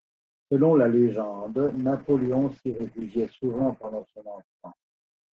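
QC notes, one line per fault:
1.4 s to end: call bitrate drop. Top end narrows from 12 kHz to 8 kHz, and coarser coding sounds rough, which fits roughly 32 falling to 9 kbps.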